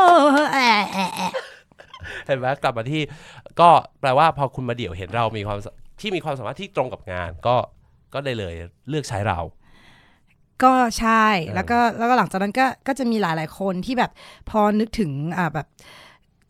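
No technical faults can be heard anywhere in the recording, and the signal stays intact and continuous throughout.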